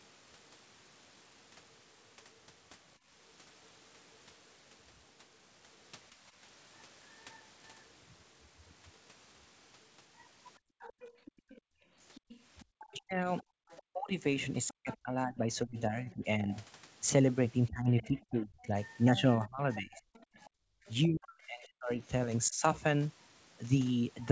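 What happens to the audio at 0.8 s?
Nothing goes wrong at 0.8 s; the speech passes through intact, with only the expected 8 kHz upper limit of the G.722 call path and the microphone processing.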